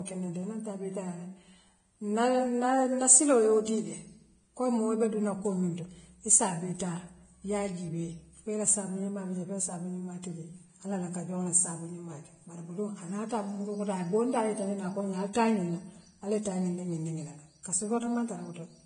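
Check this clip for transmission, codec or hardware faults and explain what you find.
Two codec faults are present: heavy lossy-compression damage across the whole speech clip, and two brief pre-echoes.

Vorbis compression: Throughout, nothing sits above 9.7 kHz, and the remaining treble is grainy and hissy, pointing to a low bitrate of around 23 kbps. The likely cause is Vorbis coding, whose coarsely quantised residue turns fine high-frequency detail into noise. A spectrogram shows a flat ceiling at 9.7 kHz with speckled, smeared energy below it.

Pre-echo: At 15.33–15.35 s and 17.63–17.65 s, a short hiss of about 20 ms precedes a sharp onset, which sounds softened. Quantisation noise sized for the loud attack spreads across the whole transform block, including the quiet start. The waveform shows low-level fuzz just before each attack, and the spectrogram shows a broadband smear leading it.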